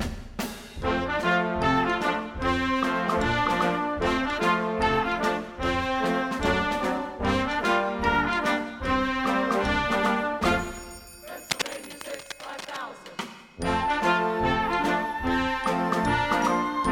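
A worn cable, connector or control was likely moved, its contact resistance jumping about from 11.50 to 12.81 s. The result is cable scratch noise: dense, uneven bursts of scratching and rustling laid over the sound, roughly 10 dB below it.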